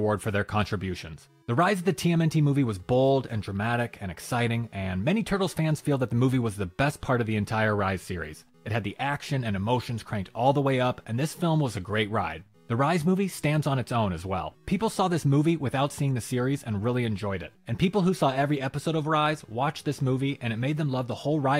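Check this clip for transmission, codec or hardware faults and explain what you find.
Listening through the clip turns up no fault to report. Nothing along the chain from source to playback leaves an audible mark on the sound.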